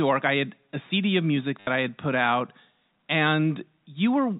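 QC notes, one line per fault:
1.60 to 1.67 s, packet loss with last packet repeated: between "of music" and "I had put out", 70 ms goes missing and the last chunk loops. The run buzzes near 100 Hz, fitting 10 ms packets, a short robotic stutter.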